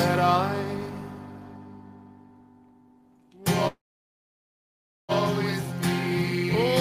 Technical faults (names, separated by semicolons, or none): call audio freeze